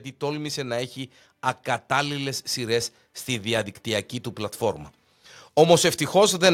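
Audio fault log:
1.87–4.16 s automatic gain rising: speech and background swell together by about 4 dB as the gain control lifts a quiet input, levelling off just before "του πλατφόρμα".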